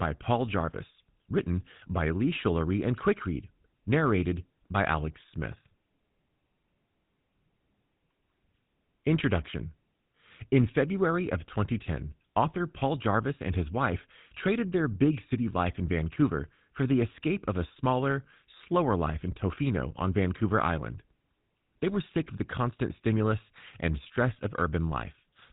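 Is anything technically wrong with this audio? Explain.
Yes. Throughout, the speech carries GSM full-rate codec damage. Nothing passes above 3.8 kHz, and the vocal tract is modelled and driven by sparse, regularly spaced excitation pulses, giving a plainly audible buzzy, gravelly roughness, consistent with a 13 kbps GSM full-rate link.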